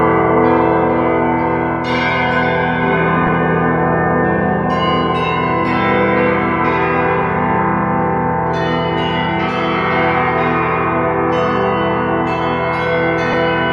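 At 3.27 to 3.29 s and again at 13.33 s, lost LE Audio frames (about 15 ms, then 7.5 ms, fitting 7.5 ms LC3 frames) are patched with the previous spectrum under randomised signs. Tones smear into brief noise, which shows as thin blurred vertical stripes on a spectrogram.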